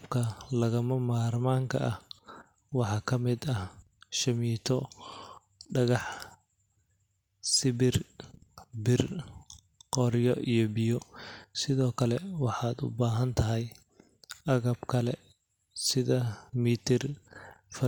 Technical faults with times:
none

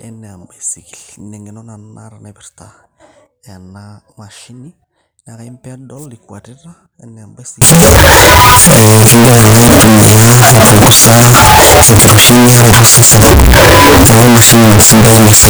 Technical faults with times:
7.62-15.50 signed and unsigned mixed up

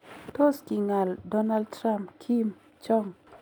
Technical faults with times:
none

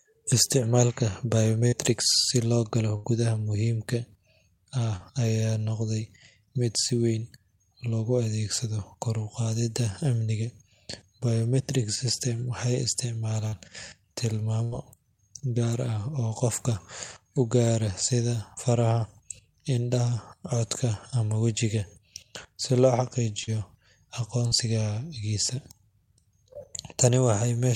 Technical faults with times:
1.67-1.75 burst of packet loss
2.96-3.07 burst of packet loss
14.64-14.75 burst of packet loss
23.44-23.50 short concealed packet loss
24.47-24.54 short concealed packet loss

